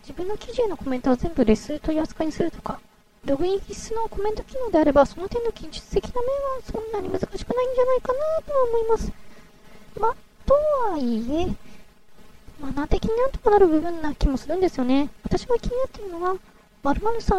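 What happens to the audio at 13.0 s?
Nothing goes wrong at 13.0 s; the audio plays through that moment intact, with no audible fault.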